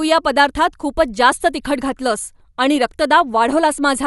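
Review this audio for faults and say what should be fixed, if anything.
The whole clip has a dull, band-limited sound, with nothing above 11.4 kHz, and a rough, fluttering grain around the speech. That's likely Dolby Digital compression at a low bitrate, which fits something around 64 kbps. At that rate the encoder cuts the top of the band and leaves many frequency lines without real detail, so the decoder fills them with noise. That's the flutter you hear. To prevent it, encode at a higher bitrate or keep a less compressed master for review.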